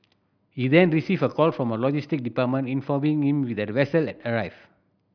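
No technical faults can be heard anywhere in the speech. Nothing in the recording points to trouble in how it was captured, processed or played back.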